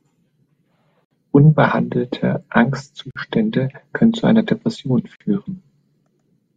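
Speech with three gaps at joins of encoded pieces: 1.05 to 1.11 s, 3.11 to 3.16 s, 5.16 to 5.20 s. Silences of 61 and 48 ms recur every 2 s, with encoder delay and padding left untrimmed.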